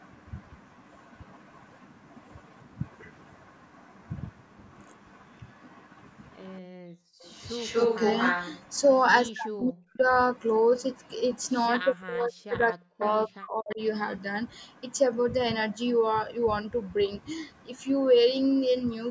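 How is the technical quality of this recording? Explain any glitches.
The recording has clear echo-canceller trouble in its middle section, between about 6.6 and 13.8 s. The speech carries no content above 8 kHz, which reflects the call's microphone processing rather than a fault.

From 6.61 to 7.24 s the background is gated by the echo canceller. The room sound sinks by about 40 dB for roughly 0.7 s, leaving an unnatural dead silence, then snaps back. While the far end was playing through the loudspeaker, the canceller clamped the microphone hard, and the ambience disappeared with it until the canceller released.

Echo leak follows in three places: 7.25 to 7.29 s, 7.46 to 8.59 s, and 13.01 to 13.05 s. A delayed copy of the speech trails the original by about 240 ms. It is very faint in the first brief scrap, sits only slightly below the main speech across the longer stretch from 7.46 s, and is moderately quiet at 13.01 s. 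The likely cause is a loudspeaker-side echo canceller that failed to subtract everything its microphone picked up, so the remainder was sent back down the line.

Speech suppressed in double talk appears from 9.31 to 10.03 s, 11.82 to 13.05 s, and 13.26 to 13.8 s. In each stretch the talker's voice ducks steeply, as much as roughly 40 dB, for up to about a second. This likely happened because both sides spoke at once. The canceller could not separate the local talker from the loudspeaker echo, so it attenuated both.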